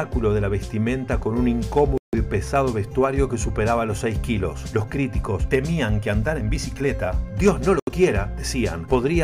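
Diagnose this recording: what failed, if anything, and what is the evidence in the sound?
Dropouts at 1.98 s (154 ms) and 7.80 s (76 ms) appear as flat waveform gaps and blank spectrogram columns, likely a Bluetooth stall draining the headphone buffer.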